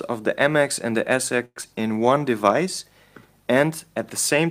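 From 1.45 to 1.66 s, a likely long network dropout: about 185 ms of concealment fill fading to 40 ms of silence, with 100 ms of sound lost before playback resumes. From 1.68 to 2.20 s, a jitter buffer slow-down repeats pitch periods to rebuild reserve, adding 80 ms and running the sound at 86% speed without any change in pitch.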